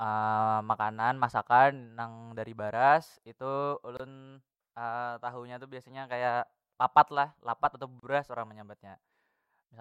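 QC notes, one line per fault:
3.97–4.00 s and 8.00–8.03 s, gap at a join of encoded pieces: the speech drops out for about 25 ms, then 32 ms, at a regular 4.0 s spacing. Separately encoded pieces were joined with their start delay and end padding left in. On the waveform this shows as a flat dead stretch with abrupt, slightly smeared edges. On the spectrogram it is a narrow blank vertical band across all frequencies, with the sound resuming where it stopped.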